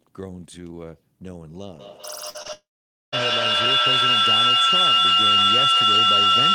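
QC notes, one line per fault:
1.79 to 6.54 s, feedback howl: From 1.79 s a tone near 3 kHz rises out of the speech and keeps growing until it stands about 13 dB above it, still sounding when the clip ends. The sound leaks from a loudspeaker back into a microphone on the same call and gains level on each trip, so it narrows to one pitch instead of dying away. The loop delay is about a fifth of a second. Unlike a steady interference tone, it swells.
2.29 to 2.36 s, burst of packet loss: About 40 ms of audio never arrived, and the receiver spent roughly 51 ms extending the last sound, letting it fade before real audio resumed further along. The result is a held, dimming buzz or hiss with a small jump afterward where the missing stretch was skipped. It is longer than the brief smears that follow. It is also far shorter than the later dropout, and it never reaches silence.
2.42 to 2.47 s and 2.47 to 2.51 s, short concealed packet loss: Two back-to-back holes of about 20 ms each were patched by continuing the preceding sound, for about 25 ms and then 16 ms, before blending back into the real signal. 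What you hear is a quick smear or wobble, possibly swallowing a brief consonant, rather than a held tone. That brevity separates them from the burst at 2.29 s just before.
2.53 to 3.14 s, long network dropout: The sound is extended briefly, fades, and then about half a second of silence follows before audio returns further on with roughly 600 ms gone. This is likely a network outage, with no packets reaching the receiver for the whole stretch. What sets it apart from the earlier packet losses is the long gap of true silence after the concealment gives up.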